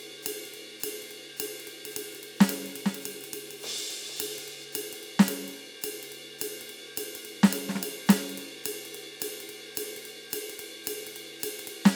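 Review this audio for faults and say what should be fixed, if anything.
Doubled audio track, 1.85 to 4.65 s: a full-band copy of the music trails about half a second behind, roughly 10 dB quieter, and starts and stops abruptly, likely from a second, slower capture path. To prevent it, route each source through a single capture path and check edits for overlapping duplicate regions before export.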